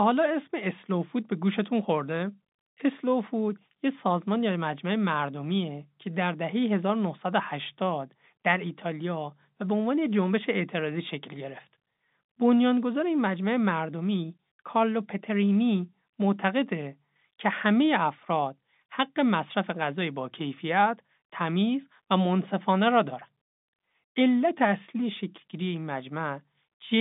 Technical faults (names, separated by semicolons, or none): none